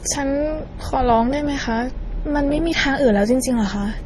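Across the whole speech clip the top end stops dead at 12.3 kHz, and the remaining band carries two textures at once: the artefacts of both codecs heard together. This is likely transcoding between lossy codecs, consistent with a 32 kbit/s MP3 pass followed by a 32 kbit/s Opus encode. The second encoder spent its bits re-coding the first one's damage and added its own. On a spectrogram the energy ends in a flat shelf at 12.3 kHz, with blotchy, time-smeared patches below it.

From 2.87 s to 3.92 s, GSM signalling bursts cut in: a galloping dit-dit-dit of short raspy 217 Hz buzzes, around 30 dB below the speech. A nearby 2G handset was exchanging brief groups of radio bursts with its network, and the audio circuitry rectified them into sound. Each buzz repeats at 216.7 Hz. A spectrogram shows clusters of vertical stripes with a dense harmonic comb stacked on 217 Hz, and the waveform shows small rectangular pulse trains riding on the signal.

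From 3.98 s to 4.01 s, a short stretch of GSM phone buzz appears, about 31 dB below the speech. This is the in-call pattern: the handset transmits 216.7 bursts per second, and those pulses are demodulated into a hard, rasping tone with no relation to the speech. On a spectrogram it is a brief block of evenly spaced harmonics on a 217 Hz fundamental. In the waveform it is a tight, regular pulse train.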